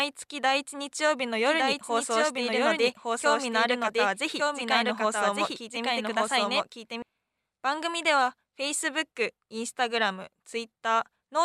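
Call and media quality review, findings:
Doubled audio track, 1.46 to 7.02 s: speech repeats about one second late, copy roughly as loud as the original, full-band, dry, no decay. Likely cause: a slower second capture path or an edit leaving two offset copies. Waveform: overlapping duplicate envelopes shifted one second. Spectrogram: identical harmonic patterns repeated a second later. Both edges abrupt.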